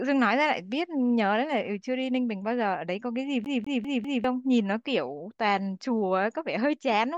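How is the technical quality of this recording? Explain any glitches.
The recording has two glitches in the speech. From 0.34 to 2.75 s, a Bluetooth SBC bit pool drop dulls the treble and adds gritty noise. The sound points to the bit pool falling from 28 to 14, around 108 kbps. Unlike a plain low-pass filter, the remaining bands also turn coarse and grainy. From 3.45 to 4.24 s, the CD gets stuck on one turn, replaying the same 0.2 s slice four times with a brief mute at each jump. Its even, rapid rhythm distinguishes it from network packet repeats.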